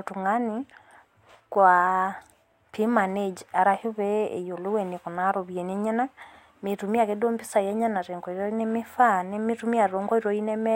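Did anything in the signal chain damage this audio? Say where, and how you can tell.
No, nothing along the way has left a mark I can hear on this speech recording.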